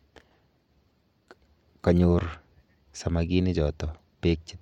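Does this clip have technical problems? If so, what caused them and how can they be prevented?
No, nothing in this speech clip stood out as a technical problem on listening, so there is no cause to trace or prevent.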